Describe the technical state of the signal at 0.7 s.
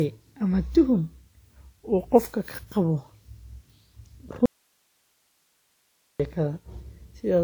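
At 0.7 s the speech carries generation loss, present across the whole clip rather than at this moment alone. It sounds swirly and hollow, with smeared consonant attacks, yet content reaches up to about 20.1 kHz. A single encode at a bitrate that fits 96 kbit/s WMA would not sound this degraded, which likely points to repeated lossy passes, roughly four. Each pass requantises on a shifted frame grid, so noise and spectral holes accumulate.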